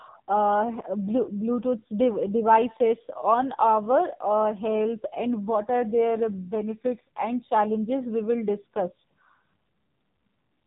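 From start to finish the speech carries AMR narrowband mobile codec damage, heavy at what sounds like about 5.9 kbps. Nothing passes above 3.8 kHz, so a spectrogram shows a hard ceiling there. So few bits leave a buzzy, synthetic voice rebuilt from sparse pulses through a vocal-tract model.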